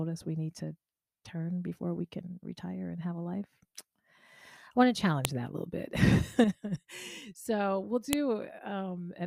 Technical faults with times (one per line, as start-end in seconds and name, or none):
5.25 file header played as audio
8.13 file header played as audio